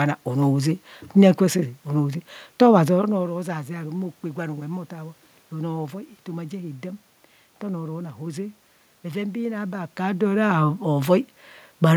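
Nothing in this speech recording stands out as a technical problem, so there's nothing here to flag.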